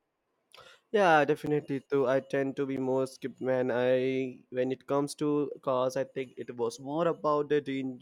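Twice the stream has a block of digital silence, where samples were replaced by zeros: at 1.46 s for about 8 ms, and at 2.77 s for about 11 ms, which fits a 512-sample buffer. The speech drops to zero and back with no fade, so each gap is heard as a tick or dip.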